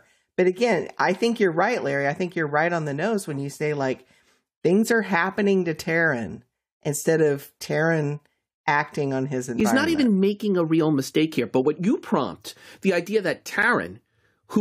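At 9.60 s, between "acting on his" and "not even making a", and at 13.62 s after "prompt the idea that", there's a gap between stream segments. Segment timestamps don't line up, so hard-edged silences of 5.3 and 8.0 ms are inserted at 2 s segment boundaries, but no speech is lost.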